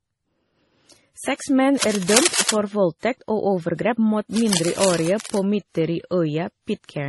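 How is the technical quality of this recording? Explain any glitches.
The recording has clear technical problems: layered compression damage throughout and two bursts of scratching noise.

Throughout, the speech sounds smeared, dull and warbly, with mixed artefacts, likely from transcoding between lossy codecs, consistent with several low-bitrate encodes ending in MP3.

From 1.78 to 2.56 s and again from 4.37 to 5.38 s, rough rustling cable scratch noise appears, first about as loud as the speech, then softer. It is likely a worn connector's contact resistance fluctuating.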